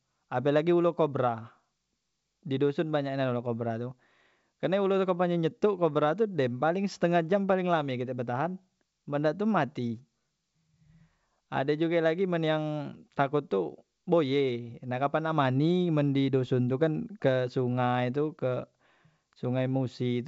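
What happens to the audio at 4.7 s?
At 4.7 s the speech is intact, carried by full-rate G.722 wideband telephone coding with nothing heard above about 7.7 kHz.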